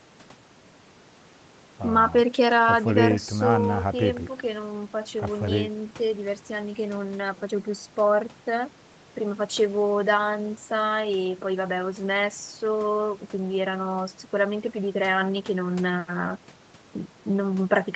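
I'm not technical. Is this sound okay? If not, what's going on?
Yes, this speech sounds fine, and the slightly thin bass is just the normal filtering a call microphone does, nothing to worry about.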